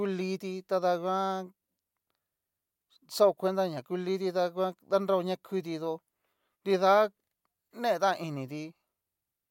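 No technical faults are audible.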